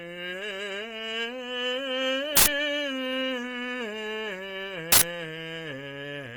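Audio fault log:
Throughout: Opus compression. The music sounds grainy and rough, and sustained tones turn noisy rather than clean. The damage is plainly audible across the clip. The top end stays open, so the bandwidth has not narrowed. This points to the encoder's music mode, which keeps each band's energy but fills starved bands with folded or noise content. The likely cause is Opus at a low rate, around 24 kbps.
2.37 to 2.46 s and 4.92 to 5.02 s: uninitialised buffer. Each event is a sudden, loud burst of harsh digital noise lasting about 93 ms. The playback reached a block before any audio had been written into it. Stale memory was played out as if it were samples, so the output is random-sounding garbage rather than music. The length fits a 4096-sample block.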